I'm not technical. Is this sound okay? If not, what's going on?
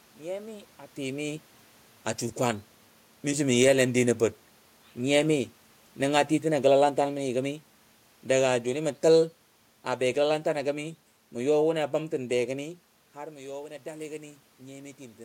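No. The level of the recording is being changed by the equipment itself, twice.

The first change is automatic gain falling. From about 5.25 to 12.51 seconds, the recording system decides the sound is too loud, or that the background noise is too strong. It slowly turns its own volume down over those seven seconds. You hear the voice sink, and the room noise behind it sinks along with it. That shared fade gives it away: the machine moved, not the talker.

The second change is automatic gain rising. Around 12.5 seconds the talker seems to move away from the microphone, and the voice drops sharply. From 13.16 to 15.2 seconds the system reacts by turning its volume back up, gradually. The voice swells again, but only partly, so it stays quieter than before. The background noise grows with it as it climbs.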